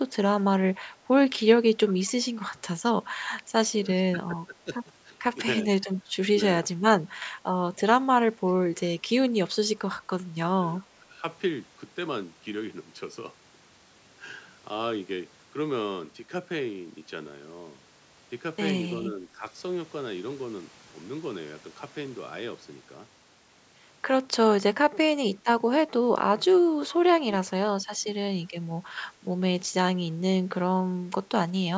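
Speech suppressed in double talk hits this speech recording at 0.74–1.12 s, 3.73–8.40 s, 10.80–11.23 s, 19.08–19.43 s, 24.83–29.39 s and 31.02–31.29 s. The talker's level dips in pieces, by roughly 5 dB in the other shorter spots, by about 15 dB at 10.80–11.23 s, and by 15 to 20 dB in the longer spans, where about a second and then about two seconds in total are pushed down. The likely cause is the echo canceller mistaking overlapping talk for its own loudspeaker echo and attenuating everything. An echo leak appears at 1.87–2.27 s as a faint copy of the voice delayed by 386 ms, some 25 dB below the speech, likely from a loudspeaker whose echo canceller let residue through. The band stops at 8 kHz, as expected from call microphone processing.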